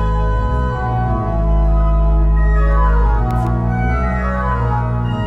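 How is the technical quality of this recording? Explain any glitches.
The recording has one glitch, a short run of CD scratch ticks from 3.15 to 3.63 s. Four small ticks repeat at a steady rate of about six a second, the longest around a millisecond. A scratch on the disc wipes out more data than error correction can rebuild, once per revolution, and the player interpolates or mutes the damaged samples. That even spacing is what sets these ticks apart from the randomly scattered clicks of vinyl dust.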